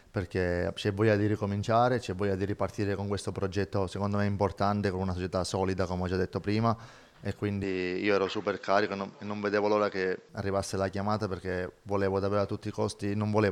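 From 7.64 s to 10.29 s the sound turns duller, with nothing above 7.7 kHz and a faint new noise floor about 40 dB down, most likely an input switched to a poorer device. There is no gap and the level barely changes, but a spectrogram shows the top band abruptly cut off across that stretch.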